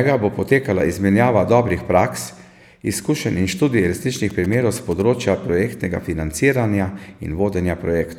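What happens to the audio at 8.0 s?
At 8.0 s the speech carries on without interruption, with no dropout, click, distortion or other fault at that point.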